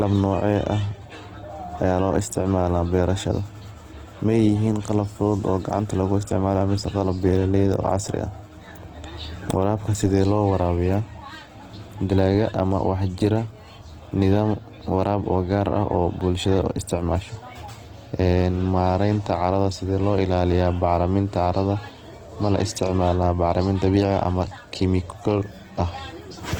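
From start to finish the speech sounds rough and grainy, with plainly audible codec damage, likely from Opus compression in its CELT mode at a bitrate that fits about 16 kbps. A spectrogram would show bands filled with noise rather than holes, with content reaching 20.2 kHz.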